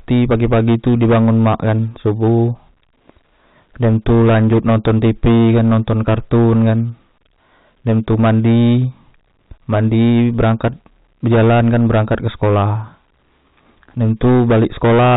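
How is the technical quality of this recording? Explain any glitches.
The recording has one serious problem: heavy clipping across the whole clip.

Hard clipping, present from start to finish: the speech reaches the converter about 13 dB hotter than it can pass, so every peak is sliced flat, and a sizeable share of the waveform, something like one sample in seven, sits pinned at the ceiling. Those squared-off tops generate a spray of high harmonics, giving the voice a harsh, buzzy fuzz on all but the quietest syllables. The telephone-band coding passes nothing above 4 kHz.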